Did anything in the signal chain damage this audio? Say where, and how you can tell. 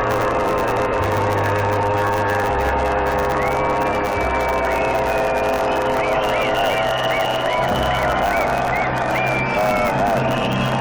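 Yes. The damage sits at the driver or buffer stage, where a block size mismatch (truncated) runs through the whole clip. A steady 100 Hz buzz marks the block rate, and the audio plays about 1.09 times fast while its timbre stays put. That combination means the tail of every block is being discarded. On a waveform you would see discontinuities every 10 ms. A spectrogram would show a comb of harmonics spaced 100 Hz apart.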